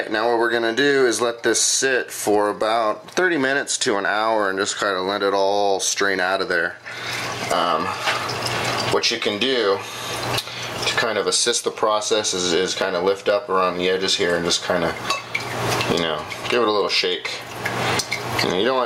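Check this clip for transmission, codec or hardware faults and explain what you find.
One fault is present, gain pumping, and it runs through the whole clip. The level swings by roughly 25 dB. The likely cause is input gain set far too high for the microphone, with a fast limiter or compressor clamping down on each peak and releasing in the pauses. The result is squashed dynamics, with loud and quiet passages pushed close together.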